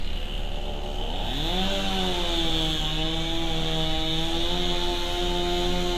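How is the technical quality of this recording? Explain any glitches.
The technical quality is limited by one fault that runs through the whole recording: audible lossy-codec damage, most likely Vorbis compression at a low setting.

Vorbis compression, from start to finish: there is no content above 14.2 kHz, and the treble is quantised so coarsely that fine detail turns into hiss and grain, roughening tonal parts and blurring attacks. The damage is consistent with a low bitrate around 34 kbps. A spectrogram would show a hard ceiling at 14.2 kHz and speckled, patchy high bands. The waveform would show softened transients.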